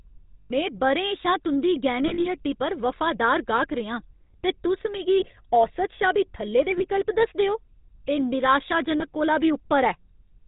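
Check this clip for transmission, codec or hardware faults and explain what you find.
Two faults are present: GSM full-rate codec damage throughout, and five short dropouts from lost GSM frames.

Throughout the speech there is a plainly audible buzzy, gravelly roughness with nothing above 4 kHz, consistent with the 13 kbps GSM full-rate codec, which drives a vocal-tract model with sparse regular pulses.

Lost GSM frames produce a brief rough, metallic ring at 0.40–0.51 s, 2.08–2.27 s (scattered gaps, longest around 40 ms), 5.20–5.25 s, 6.78–6.86 s and 8.98–9.08 s, where the decoder repeated the last good frame.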